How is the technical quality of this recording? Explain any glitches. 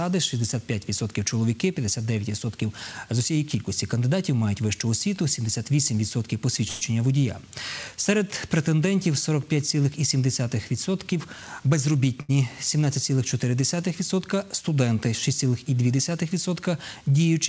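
The recording has three timing glitches, all typical of audio carried over a call link. The sound is band-limited with nothing above 8 kHz, which fits a wideband call codec such as G.722 at 64 kbps.

At 6.68 to 6.95 s there is a call audio freeze. The sound stops advancing and the last moment is drawn out as a fading buzz or hiss for about 134 ms, then continues from where it left off. Nothing is lost, but a gap has been put into the timeline. The likely cause is packets held up in transit, so the jitter buffer ran dry and the receiver had to fill the wait by extending what it already had.

From 11.12 to 12.17 s there is a jitter buffer speed-up. The audio runs at about 114% speed with the pitch unchanged, so it sounds briefly hurried. This is the receiver draining excess buffered audio. It repeatedly cut out short pitch-period-sized slices, shedding around 150 ms in total to bring latency back toward its target.

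At 12.21 to 12.31 s, right after the speed-up, there is a short stall from a late packet. One packet was not ready when due, so the receiver held the last sound for about 76 ms until it arrived, then resumed at the same point. Nothing is missing. What you hear is a brief unnatural sustain with a slight buzz or dip.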